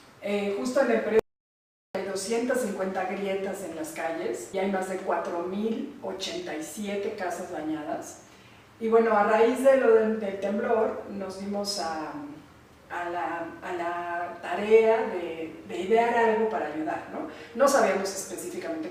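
At 1.19 s the sound cuts out abruptly. This is an audio dropout to silence. It lasts until 1.95 s, about 0.75 s. The gap is silent. There is no room tone or hiss underneath it. The input was likely lost for a moment, through a link failure or a momentary mute, while the recorder kept writing silence. Whatever happened in that stretch is gone. The sound resumes mid-flow.

Between 4.53 and 4.64 s playback skips ahead. Roughly four tenths of a second of audio is lost. Nothing fills the gap. The two sides are butted together with only a few milliseconds trimmed at the seam. The result is a sudden jump forward, not a pause. Audio was already queued behind the lost stretch, so it was discarded. The delay drops by roughly the same amount.

From 5.47 to 6.89 s the jitter buffer speeds up the sound. Playback runs at about 104% of normal rate. Pitch stays the same. The buffer had grown too full. 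The receiver cut many short pieces, each a pitch period or so long, to catch up. Roughly 70 ms is removed in total. The passage runs slightly fast.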